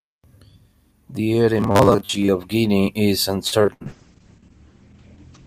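From 1.58 to 2.30 s the speech takes on a rigid, metallic 100 Hz buzz, robotic sound most likely from repeated short buffers: audio arriving too seldom, with roughly half the stretch filled by repeating a 10 ms slice, which imposes that fixed pitch while the underlying words still roughly come through.

Between 3.47 and 3.82 s there is repeated packet loss (robotic sound): four holes, the longest 66 ms, each patched by extending the preceding sound. About 150 ms is concealed this way while 100 ms of real audio is missing, so the passage turns choppy and mechanical.

From 3.83 s to the end a call bitrate drop takes hold, with the encoder pushed from 64 kbps down to 9 kbps. Coarser coding roughens the speech, and the audio bandwidth shrinks from 20 kHz to 8 kHz, leaving it dull and muffled.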